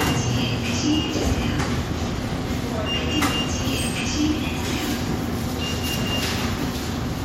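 Nothing in this recording stood out as a technical problem on listening.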